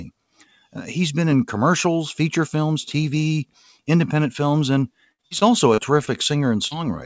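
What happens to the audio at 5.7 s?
At 5.7 s the speech falls inside a stretch of repeated packet loss, from 5.06 to 6.10 s. Packets kept going missing, and each hole was patched by extending the previous sound. About a fifth of that span is patched, with gaps up to 61 ms. It sounds choppy and robotic.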